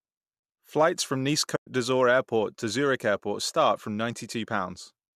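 Speech with a soft-edged dropout from 1.56 to 1.66 s, about 110 ms, caused by AAC frame loss with muting. The missing frames were zeroed, so the sound fades out and back in. The length fits about eleven short frames, and the light coding texture is likely from low-delay AAC compression.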